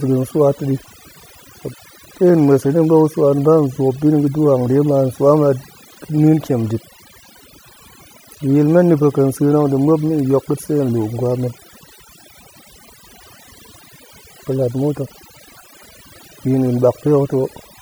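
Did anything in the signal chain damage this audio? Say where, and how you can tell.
Yes. Throughout the speech, the background drops to near silence flecked with twinkling specks. That's overdone noise removal at a noise-reduction processing stage: an aggressive suppressor cuts bands near its noise estimate, taking quiet speech detail too.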